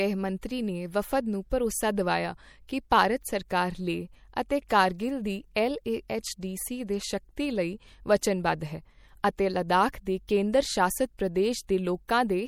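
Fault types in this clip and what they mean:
MP3 compression: The whole clip has a watery, swirly quality and plainly audible coding damage, likely from MP3 encoding at a low bitrate, which fits something around 64 kbps. With that few bits, the encoder throws away weak frequency detail, and those bits flicker on and off between frames, so the speech picks up a metallic, chirpy edge on sibilants. The top end stops dead at 19.7 kHz, where the encoder's treble cut sits.
pre-echo: Around 4.68 to 4.70 s there's a brief smear of hiss just ahead of a sharp onset in the speech, spreading about 20 ms before it. The codec spreads its quantisation noise across a whole block, so when a hard attack lands late in that block, noise meant to hide under the loud part leaks into the quiet moment before it. The attack itself comes across softer and less crisp.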